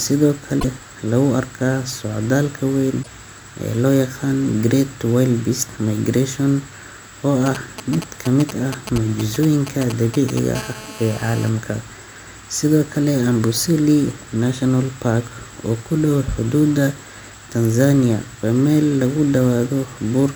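A short glitch breaks into the speech at 0.56 to 0.65 s and again at 2.99 to 3.07 s. This is damaged data in a compressed stream: corrupted bytes made the decoder misread frames, lose sync and hunt for the next valid frame header.

From 7.46 to 10.39 s a galloping dit-dit-dit of brief raspy 217 Hz buzzes runs under the speech, roughly 10 dB below it. These are GSM signalling bursts: a nearby 2G phone sent short groups of radio bursts while signalling, and the audio circuitry rectified them into sound.

At 10.55 to 11.49 s the pattern gives way to a continuous hard, harmonic-rich buzz at 217 Hz, about 16 dB below the speech. This is GSM phone buzz from the same kind of phone, now in a call, whose bursts repeating 217 times a second were rectified into the audio.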